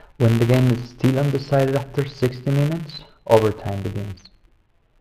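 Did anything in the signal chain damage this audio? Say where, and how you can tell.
Yes. A filter restarted on every block runs through the whole clip as a steady 172 Hz buzz that rises and falls with the speech level. That points to a 256-sample block in the processing stage, with the filter dropping its state each block.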